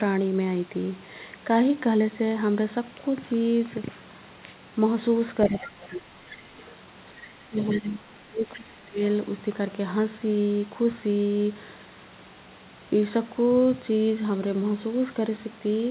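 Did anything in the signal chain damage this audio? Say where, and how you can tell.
Yes. The damage is in call processing. The other side's voice is leaking through at 5.48 to 5.67, 6.27 to 6.41, 6.6 to 6.75, 7.57 to 7.8 and 8.54 to 8.6 s. It sits about 15 to 30 dB below the talker. The likely cause is an echo canceller leaving loudspeaker pickup in the microphone signal.

Speech is also suppressed in double talk. The talker's level dips at 5.5 to 6.15, 7.13 to 7.58 and 7.74 to 8.99 s, by about 20 to 25 dB at the deepest. These dips overlap the leaked voice. The canceller likely could not separate the two, so it turned both down.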